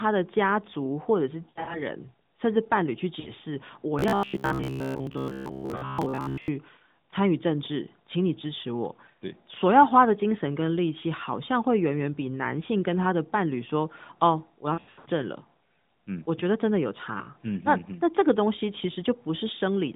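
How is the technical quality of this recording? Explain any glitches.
The recording has two kinds of glitch over a narrowband mobile line that passes roughly 150 Hz to 3.7 kHz: dropouts from lost AMR speech frames, and a stretch of robotic sound from repeated short buffers.

Lost AMR speech frames occur at 1.50–1.82 s, 3.20–3.30 s, 14.74–15.09 s and 17.18–17.26 s. Frames corrupted in transmission failed their check, so the AMR-NB decoder rebuilt each gap from the last good pitch and vocal tract settings at falling gain. The single missing frame near 17.2 s makes a brief dip. The longer bursts, with runs up to 80 ms, turn into smeared, warbling dropouts that briefly sound rough as the speech recovers.

Robotic sound from repeated short buffers runs from 3.99 to 6.48 s. Audio most likely arrived too slowly, and the playback side filled the gaps by looping its last short buffer for most of that stretch. 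The repeating imposes a fixed buzz at about 66.7 Hz, which fits a 15 ms buffer. The speech becomes a rigid, metallic drone that only loosely follows its original rhythm.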